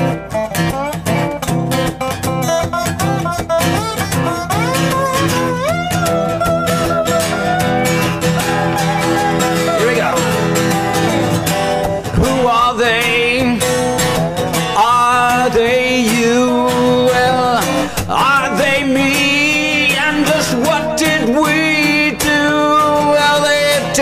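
No technical faults can be heard at any point in the audio.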